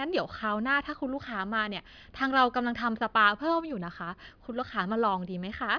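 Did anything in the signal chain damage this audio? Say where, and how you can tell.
No, nothing in the signal chain damaged this audio that I can hear.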